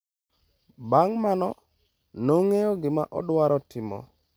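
No technical faults can be heard anywhere in the speech; the signal stays continuous and steady throughout.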